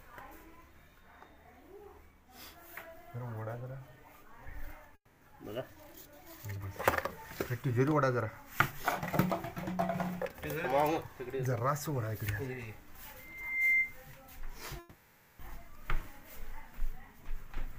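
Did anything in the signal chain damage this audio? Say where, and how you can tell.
Yes. From 4.95 to 5.23 s, the sound is replaced by a fading buzz or hiss lasting 260 ms, ending in about 70 ms of silence. From 14.79 to 15.41 s, a 600 ms fill covers the gap with no silence. Both gaps are lost audio, likely a long network dropout concealed by the receiver.

A loudspeaker feedback squeal occurs in the acoustic and analogue path from 13.19 to 13.98 s. A single 2.1 kHz tone swells over about half a second. It peaks roughly 10 dB above the signal. The microphone is hearing its own loudspeaker, and the loop gain exceeds one at that frequency.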